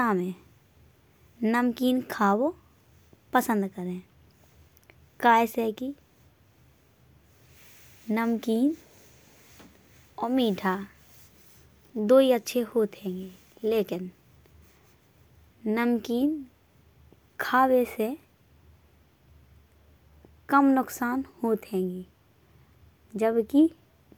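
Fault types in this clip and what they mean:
No technical faults can be heard in this speech clip. None of the fault types apply here.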